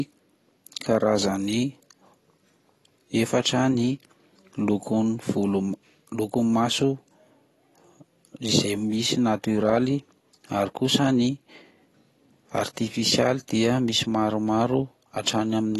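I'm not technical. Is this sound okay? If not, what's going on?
No. The speech was most likely squeezed through AAC compression, which throws away detail to save space. Throughout, everything above about 12 kHz is gone, leaving the speech dull and muffled, with a noticeable smeared, warbly, fizzy texture on hissy sounds.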